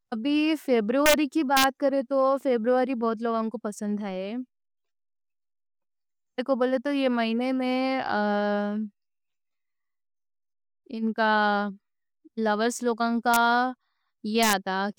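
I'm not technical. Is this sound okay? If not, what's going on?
No. This speech has a fault called integer overflow. You'll hear sharp, violent cracks at 1.06 to 1.14 seconds, 1.57 to 1.64 seconds, 13.34 to 13.36 seconds, and 14.43 to 14.53 seconds. They happen when the sound gets loud. The recording has a ceiling on how loud it can go. Here, the loudest moments didn't stop at that ceiling. They wrapped around to the opposite extreme. That sudden jump is the crack.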